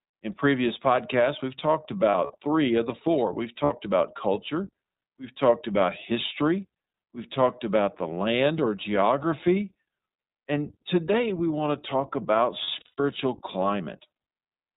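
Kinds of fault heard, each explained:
iLBC codec: The whole recording passes through iLBC, a narrowband VoIP coder working here in 20 ms frames at 15.2 kbit/s. Each frame's excitation is coded on its own, and the damage is plainly audible as a rough, slightly synthetic edge on the speech. A spectrogram shows a hard ceiling at 4 kHz with nothing above it, and harmonics below look smeared and grainy rather than clean, with a faint frame-rate texture.
Lost iLBC frames: Where packets went missing, the decoder filled each gap by repeating the last pitch cycle mixed with noise, giving a brief held, buzzy vowel. Losses total 100 ms scattered across 2.10 to 2.35 s, 60 ms at 3.64 to 3.71 s, and 240 ms across 12.64 to 13.04 s, the longest run about a tenth of a second. On a waveform these show as repetitive periodic stretches, and the voice snaps back cleanly immediately afterwards.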